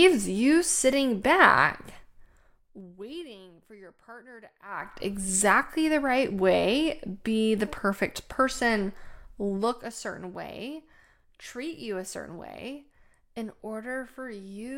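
A speech clip where the gain is being lowered in coarse 2 dB jumps with no smoothing, which is zipper noise. Each jump clicks, so a zipping tick rides on the speech from 1.97 to 3.34 s (after "you sitting back"), dropping about 25 dB, and again from 9.45 to 9.89 s, dropping about 10 dB.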